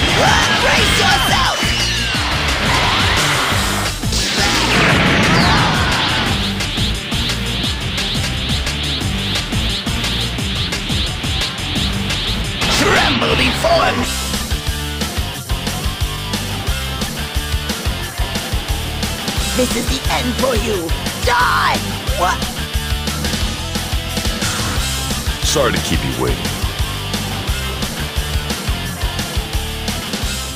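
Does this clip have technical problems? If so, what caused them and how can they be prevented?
Yes. A skip ahead at 14.03 s makes the sound jump forward abruptly, with no gap filled in. About half a second of audio is simply missing, and the two sides of the cut are butted together. A backlog had built up, so a chunk was discarded, either lost in transit or dropped by an overflowing jitter buffer, letting playback leap to later audio that was already queued. Keeping the jitter buffer sized for the network's real delay variation, and adapting it gradually rather than flushing, prevents this.

Jitter buffer speed-up follows from 14.3 to 18.9 s and again from 22.0 to 24.4 s. The sound runs about 2% fast at unchanged pitch. The buffer was holding more audio than its target, so the receiver trimmed away many tiny pitch-period-length slices, roughly a tenth of a second in the first stretch and about half that in the second, to bring the delay back down. 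A steadier network path, or smoother buffer adaptation spread over longer periods, would avoid it.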